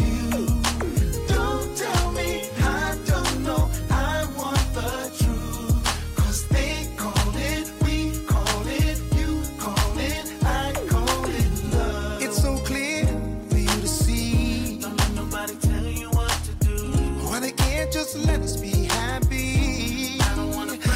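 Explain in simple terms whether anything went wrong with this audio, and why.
A click repeats every 1.27 s, from 0.79 s to 19.77 s. These are likely clock drift buffer slips: two mismatched device clocks force tiny sample blocks to drop or repeat.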